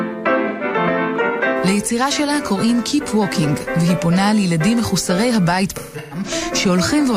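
At 0.48 to 0.63 s, AAC frame loss with concealment smears about 128 ms into a noisy, phasey patch, fitting three lost frames. From 5.70 to 6.31 s, scattered losses recur, the longest around 150 ms, which the decoder refills from the last good spectrum. Spectrograms show blurred, flattened bands.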